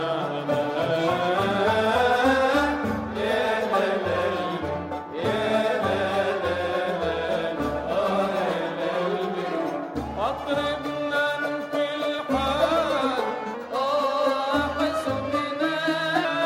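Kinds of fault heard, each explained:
Wrong sample rate: from 13.54 to 16.25 s the sound turns brighter and hurried, running about 1.09 times fast and roughly 1.5 semitones sharp. Speed and pitch rise together because the samples are clocked out too quickly, which fits 44.1 kHz material played at 48 kHz.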